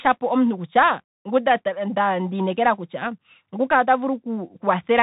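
Bluetooth CVSD headset codec damage runs through the whole recording, from start to finish, and is plainly audible. The speech is squeezed to narrowband, with nothing above 4 kHz, which fits a 64 kbps CVSD link. The codec sends only one bit per sample, marking each step up or down, and its step size adapts. Sharp loud highs outrun that step and distort, s sounds turn scratchy, and a grainy hiss sits beneath the voice. The call microphone's high-pass trimming of the deepest bass is normal.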